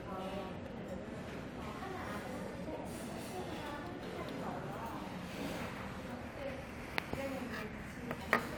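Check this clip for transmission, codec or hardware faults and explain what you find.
There is one hardware fault: sample clock jitter, present throughout. The converter's clock wanders by several microseconds, so samples land early or late. Steep, fast-changing parts of the waveform err most. The result is a hiss and roughness, roughly 25 dB down, riding on louder and brighter sound.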